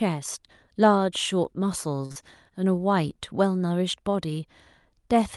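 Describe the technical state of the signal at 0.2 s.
At 0.2 s the signal is intact, with nothing wrong at that moment beyond the ordinary character of the Opus call path it travelled through.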